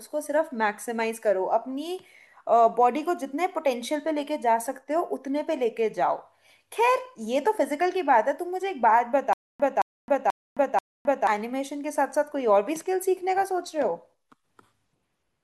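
From 9.33 to 11.27 s the speech stutters with silent gaps: a 220 ms burst replays four times, each followed by about 265 ms of dead silence, on a steady 485 ms cycle. The likely cause is a stalled stream repeating its last fragment, with the missing audio lost.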